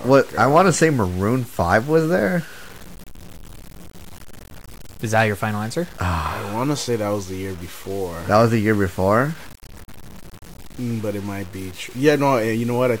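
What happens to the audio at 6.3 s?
Low bit depth without dither, present at 6.3 s and throughout: the speech is likely truncated to about 6 bits, so signal-following grainy distortion sits roughly 25 dB down.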